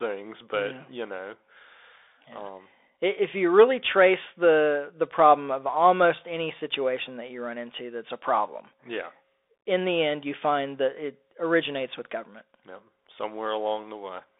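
Throughout the speech, the Bluetooth CVSD headset codec squeezes the sound into a 300 Hz to 3.6 kHz phone band, leaving a spectrogram that is empty above 3.8 kHz. Its one-bit steps, consistent with a 64 kbps stream, fall behind loud high sounds. S sounds turn scratchy over a granular hiss, and the waveform shows jagged, staircased edges.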